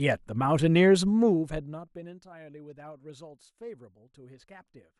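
No technical faults can be heard in this speech.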